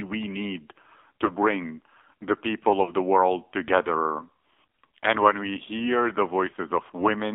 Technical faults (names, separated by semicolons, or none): AMR narrowband mobile codec; lost AMR speech frames